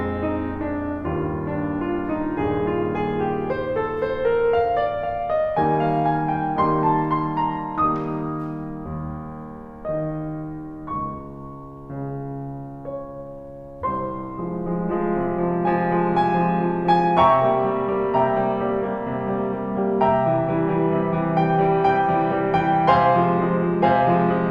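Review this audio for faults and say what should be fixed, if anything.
Nothing here needs fixing, as no technical faults can be heard anywhere in the music. No repair or preventive change is called for.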